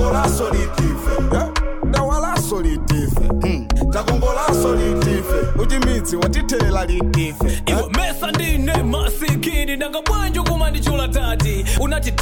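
Four brief blips at 3.69, 6.25, 9.52 and 11.77 s come from damaged data in a compressed stream. Corrupted bytes make the decoder misread frames and lose sync. It then hunts for the next frame header. Each break sounds like a short chirp, squawk, click or hole.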